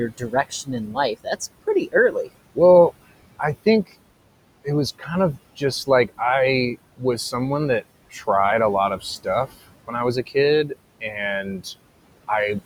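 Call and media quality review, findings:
Noise suppressor artifacts, throughout: suppressor pulls steady background down about 21 dB per frame, so the room noise pumps between phrases and rises under speech.

Speech cut by the noise suppressor, 0.09–2.57 s, 4.99–5.09 s after "it was", 5.57–6.20 s, 6.97–7.34 s, 7.81–8.28 s before "a lot", 8.97–10.36 s after "a lot", and 10.68–11.66 s: quiet consonants and endings taken for noise and ducked about 13–19 dB, sounding swallowed.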